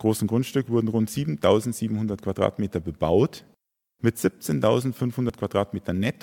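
At 5.30 s the speech is broken by a brief glitch from damaged data in the compressed stream. Corrupted bytes at that point make the decoder misread the affected frame and lose sync until it locks onto the next valid frame header, producing a short chirp, squawk, click or hole.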